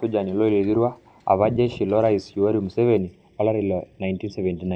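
From 2.98 s to the end, the speech turns hollow and phasey. This is channel delay (comb filtering). One channel arrives a fraction of a millisecond late, and summing to mono cancels evenly spaced frequencies. The first notch sits near 1.5 kHz.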